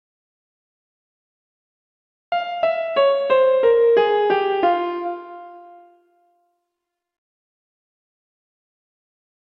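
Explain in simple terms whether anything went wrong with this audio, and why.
The recording opens in an audio dropout to silence: from the very first moment until 2.32 s there is silence, with no background hiss at all. The input was likely disconnected or muted, so whatever happened then was never captured.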